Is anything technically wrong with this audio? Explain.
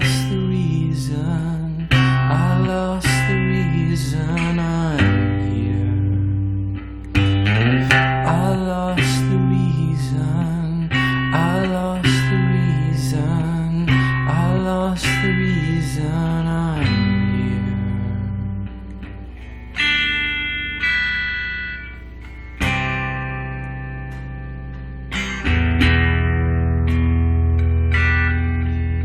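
Yes. A steady low tone sits under the audio from start to finish: a mains hum at 60 Hz, with some low harmonics above it, roughly 15 dB below the program. It comes from the power line leaking into the signal path, most often through a ground loop between connected equipment or magnetic coupling from a nearby transformer, so the hum never changes in pitch or level while the audio plays.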